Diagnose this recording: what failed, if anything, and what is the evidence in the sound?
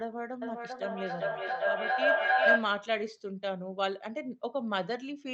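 Feedback echo between two devices, 0.42 to 2.94 s, call-processing stage. The speech returns roughly every 0.4 s, thinner and ringier each pass, and the repeats build to about 8 dB above the direct speech. A second device's playback re-enters this microphone, beyond the local echo canceller's reach.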